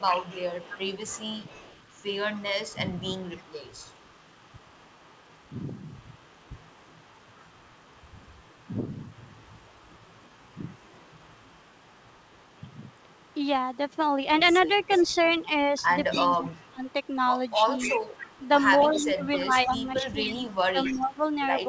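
It's a speech recording off a call, and the whole thing, from start to finish, carries a faint delayed double of the talker sitting roughly 270 ms behind and about 25 dB down. That's an echo leak: most likely a loudspeaker on one end fed its microphone, and the echo canceller let some of it through, so it came back as that quiet trailing copy. Then there's speech suppressed in double talk in five places: a small dip around 1.49 to 1.57 s, a deeper one of roughly 15 dB across 2.73 to 3.24 s, a slight one at 13.35 to 13.41 s, the heaviest at 16.13 to 17.81 s where the voice drops by something like 20 dB in chunks, and a stretch from 18.85 s to the end where it keeps sagging by around 15 dB. The likely cause is the canceller losing track of which signal was the echo while both sides talked, and ducking the near talker along with it. With nothing above 8 kHz, the band limit fits a wideband call codec like G.722.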